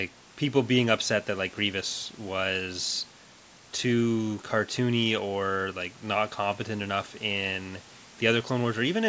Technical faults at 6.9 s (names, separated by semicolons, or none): none